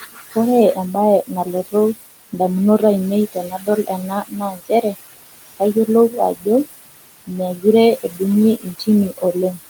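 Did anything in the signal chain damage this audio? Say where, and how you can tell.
Yes. Noise suppressor artifacts come from call processing. The room noise, about 13 dB under the speech, is pulled down by about 19 dB between phrases, leaving a pumping residue.

Speech cut by the noise suppressor, also in call processing: quiet syllables are swallowed at 0.0–0.36, 0.75–1.74, 3.32–4.96, 5.57–6.66, 7.27–7.65, 7.98–8.21 and 8.6–9.58 s, dropping up to about 21 dB.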